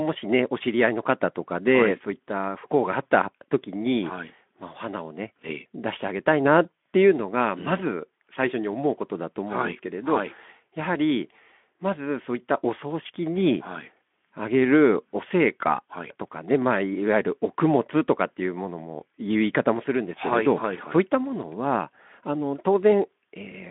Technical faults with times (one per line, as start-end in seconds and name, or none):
none